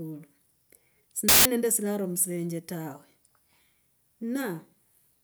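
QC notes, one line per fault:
1.29–1.45 s, samples built from the wrong bytes: for about 0.17 s the bytes of each sample are assembled out of order, so rapidly changing low bits become the dominant part of every value, giving a burst of loud, harsh broadband noise before "nende silaro musilenje tawe".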